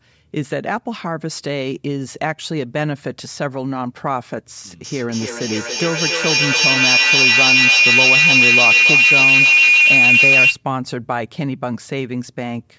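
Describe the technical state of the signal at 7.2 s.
At 7.2 s a feedback howl is under way: two devices on the same call form a microphone-to-loudspeaker loop that gains level on every trip. From 4.84 to 10.64 s a tone near 3 kHz pulses roughly every third of a second, peaking about 10 dB above the speech.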